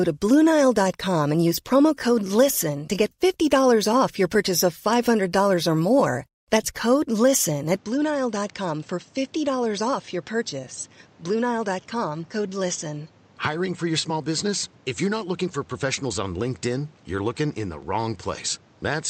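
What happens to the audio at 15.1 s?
At 15.1 s the speech sounds duller and slightly quieter, about 5 dB down, with nothing above 8.3 kHz and a new noise floor roughly 30 dB below it. This is likely an input switched to a poorer device, lasting from 7.76 s to the end, with no gap.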